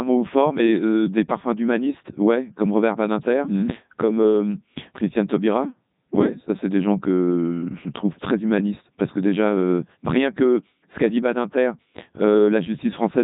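From start to finish the speech has passed through a Codec 2 vocoder, and the damage is heavy. Instead of preserving the waveform, the codec carries only pitch, voicing, energy and a coarse spectral envelope, and the decoder rebuilds the voice from sine waves. The result sounds robotic and buzzy, with nothing above 3.8 kHz. The character fits Codec 2 at its highest rate of 3.2 kbit/s.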